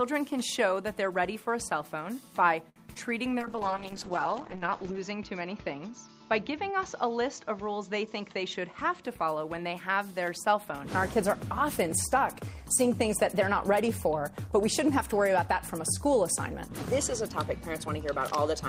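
At 2.69 to 2.78 s a short stall from a late packet holds the last sound for about 64 ms before the audio resumes where it left off, so nothing is lost but the delay grows by that amount; a spectrogram shows a brief run of frozen, repeated frames. Right after, at 2.94 to 2.97 s, a short concealed packet loss drops 20 ms of audio and fills the hole with synthesized continuation, visible as a smeared patch where the fine detail of the surrounding frames is missing. From 3.39 to 9.10 s a call bitrate drop takes the encoder from 32 to 8 kbps, bottoming out for about 1.6 s, and the audio band narrows from 20 kHz to 8 kHz; on a spectrogram everything above 8 kHz goes dark until the upper band returns at 9.10 s. Finally, from 13.40 to 14.07 s a jitter buffer speed-up trims roughly 40 ms in small pitch-period pieces, so the audio runs at about 105% speed with unchanged pitch; the waveform looks slightly compressed in time while the spectrogram's harmonic spacing stays the same.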